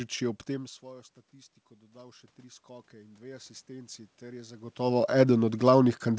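Speech recording with automatic gain rising from 1.91 to 4.8 s, just after "tem v svojo statistiko". The input level drops by about 22 dB, and the gain control slowly raises its gain by about 9 dB, lifting voice and room noise together.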